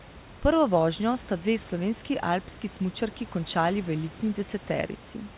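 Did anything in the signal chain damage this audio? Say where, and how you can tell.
No, nothing in the signal chain damaged this audio.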